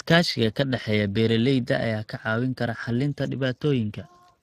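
From start to finish the speech carries USB whine, a steady tone at 8 kHz sitting faint, well below the speech. It is interference from the USB bus's 125-microsecond microframe timing leaking into the audio path through power or ground, so the pitch never drifts.

Throughout the clip the speech also shows Speex codec damage, plainly audible as coding distortion on the speech itself. This CELP codec models speech from a limited excitation budget, and the character of the artefacts points to a rate around 22 kbps. Nothing is present above 15.2 kHz.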